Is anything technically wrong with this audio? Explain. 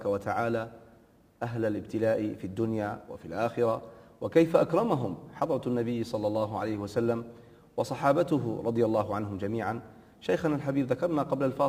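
Yes. Throughout, crude rate conversion fits a 44.1 to 48 kHz change by repeating nearest samples unfiltered, leaving inharmonic error roughly 35 dB down: a gritty buzz following loud, high sounds.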